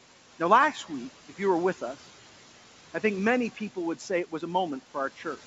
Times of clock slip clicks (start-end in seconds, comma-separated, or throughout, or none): 0.19-5.43